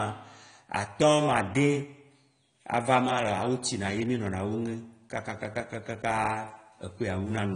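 Speech with AAC compression throughout: dull, warbly sibilants, likely from low-bitrate AAC-LC near 32 kbps, and a spectrogram shows nothing above 10 kHz.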